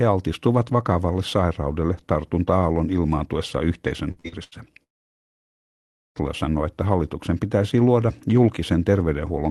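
Between 4.11 and 4.55 s, repeated packet loss leaves four gaps, the longest 78 ms, patched by extending earlier sound, so nearly half that stretch turns choppy and robotic. From 4.84 to 6.18 s the audio cuts out for about 1.3 seconds, likely a long network dropout, and resumes without the missing part.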